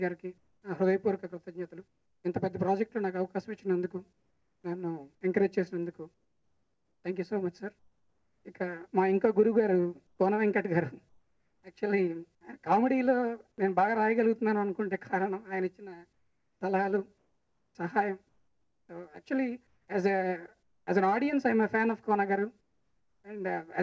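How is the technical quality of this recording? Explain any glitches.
The recording has two related call-transmission faults in its pauses and at one restart, heard over a band that stops at 8 kHz, which fits a 64 kbps G.722 call path.

Comfort noise in place of the background appears at 0.38–2.24 s, 4.13–4.64 s, 6.14–8.45 s, 10.07–11.63 s, 16.13–20.87 s and 22.61–23.24 s. The real ambience gives way to a smooth, featureless hiss, about 4 dB quieter at 4.13 s and about 6 dB quieter at 22.61 s. The likely cause is the sender pausing transmission during silence and the receiver synthesising noise. Unlike a noise gate, the pause never falls to true silence.

The onset clipped by the voice detector comes at 13.56 s, where about 20 ms of the sound's beginning is missing. The sound jumps in abruptly from the synthetic noise floor, likely because the detector reacted late to the restart. Unlike a fade-in, the attack is simply absent, not softened.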